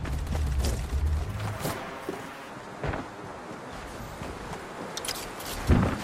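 From 1.28 to 2.50 s the sound jumps up in pitch by about 5.5 semitones and runs 1.38 times too fast. This is a wrong sample rate fault: samples were played back faster than they were captured, with no conversion, consistent with 32 kHz material played at 44.1 kHz.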